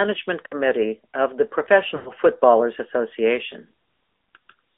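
The whole clip passes through an AMR narrowband mobile codec. The sound is confined to roughly 250 Hz to 3.6 kHz, with nothing above. The voice is plainly buzzy and synthetic, which points to a middle bitrate near 10 kbps.

Lost AMR speech frames appear at 0.46 to 0.55 s, just before "of the". The decoder reuses its last good settings with falling gain, giving a short warbly dip. That fits about three 20 ms frames. At 1.96 to 2.11 s, right after "of the", a longer run is drawn out and fades toward silence. That fits about five frames. Then the voice returns rough.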